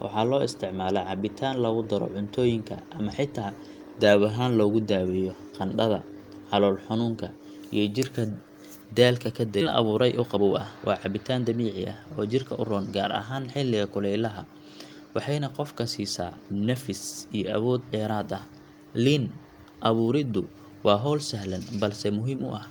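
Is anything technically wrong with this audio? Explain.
Yes, there are two faults in this speech clip.

Skip ahead at 9.61 s: about a second of speech was dropped while later audio was already waiting, so playback jumps forward with no gap.

Jitter buffer speed-up from 9.65 to 13.62 s: the receiver trimmed short pitch-period pieces to cut its delay, so speech runs about 10% fast at unchanged pitch and sounds hurried.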